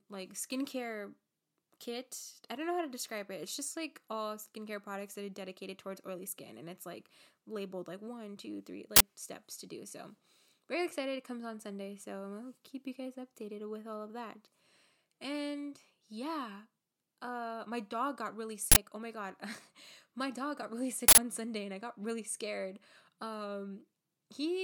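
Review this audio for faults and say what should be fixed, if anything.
Three uninitialised buffer faults cut through the speech as short, loud bursts of digital noise: 8.96 to 9.01 s and 18.72 to 18.76 s, each about 46 ms, which fits a 2048-sample buffer, and 21.08 to 21.18 s, about 93 ms, which fits a 4096-sample one. Each time, a block was sent to the output before any audio had been written into it, so stale memory contents were played as samples. Zero-fill every buffer on allocation and only hand a block to playback once it has been fully written.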